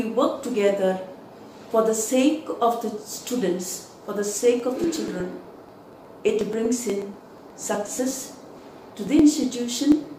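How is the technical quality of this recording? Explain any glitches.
The recording is marred by a regular clicking fault in its second half. From 4.6 s to 10.04 s there are periodic USB or driver dropouts: every 0.121 s a background task stalls the audio path, and a few milliseconds of sound are skipped outright, roughly fifty times. Each skip splices the waveform into a sudden step, heard as an even train of ticks over the signal. A spectrogram shows evenly spaced thin vertical broadband lines.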